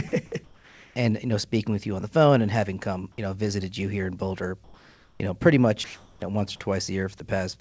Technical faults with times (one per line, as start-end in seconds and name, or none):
0.08-0.12 sound dropped by the voice detector
0.44-0.96 comfort noise in place of the background
4.64-5.20 comfort noise in place of the background
5.84-6.22 comfort noise in place of the background
7.18 sound dropped by the voice detector